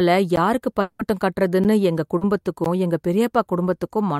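At 0.36 s the speech drops into a block of digital silence: about 12 ms of silence, which fits a 512-sample buffer the playback side failed to fill in time. It is heard as a sharp tick. The waveform shows a flat line with hard edges, and the spectrogram a thin blank column with a click streak at each edge.

From 0.81 to 1.01 s comes what is likely a long network dropout. About 180 ms never arrived and was filled by stretching the last sound into a fading continuation that never reaches true silence. On the spectrogram the sound smears flat and dim before the speech resumes with that stretch missing.

At 1.64 s another 512-sample block of digital silence gives the same abrupt tick and flat-line notch.

From 2.17 to 2.23 s a short concealed packet loss replaces about 40 ms with a continuation of the preceding sound, blended back into the real signal. It sounds like a brief wobbly smear. The spectrogram shows a soft seam.

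At 2.64 s a slightly longer block of digital silence, about 14 ms, cuts in as a click with a tiny hole. It shows as a flat segment in the waveform.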